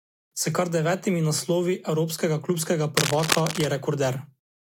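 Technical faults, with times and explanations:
2.97 to 3.64 s, cable scratch noise: a worn cable or connector was likely disturbed, its contact resistance fluctuating rapidly and injecting dense, irregular noise bursts into the signal. For about 0.7 s, scratching and rustling sits over the speech at roughly equal loudness.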